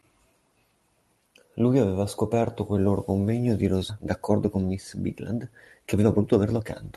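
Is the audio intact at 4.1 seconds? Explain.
No. From 4.05 to 6.64 s a jitter buffer speed-up is under way: the buffer held too much audio, so the receiver repeatedly cut short pitch-period slices, about half a second in total. The speech runs at roughly 118% speed with unchanged pitch and sounds hurried.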